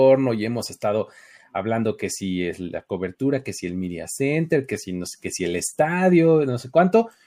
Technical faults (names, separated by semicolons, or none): none